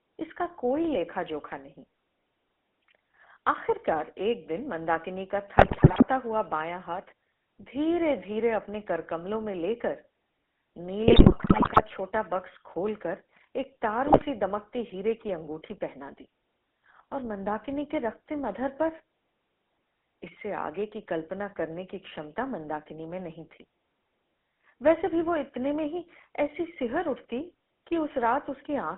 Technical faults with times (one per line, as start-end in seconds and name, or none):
0.00-28.97 GSM full-rate codec
5.58-6.03 GSM bit errors
11.08-11.83 GSM bit errors
14.06-14.23 GSM bit errors